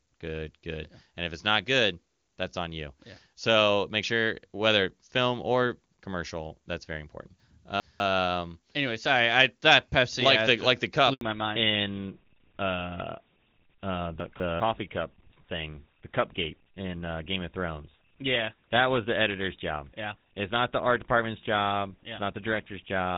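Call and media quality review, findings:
Chunks out of order, 7.4 to 8.0 s: a 200 ms block written two chunks late, so the sound jumps back and plays out of sequence, with three hard joins.

Chunks out of order again, 14.2 to 14.6 s: a 200 ms block one chunk late. This causes a brief jumbled stretch. No audio is lost, only misordered.

Handover gap, 11.13 to 11.21 s: the network switch delivered no speech frames for 80 ms. The voice dies away quickly into silence, and whatever was said there is gone.

Fallback to narrowband, 11.21 s to end: the codec dropped from AMR-WB HD Voice to an older narrowband codec, consistent with GSM full rate at 13 kbit/s. Everything above 4 kHz vanishes, leaving the voice duller and rougher. Before the switch, the wideband codec at what sounds like its top rate is clean and crisp.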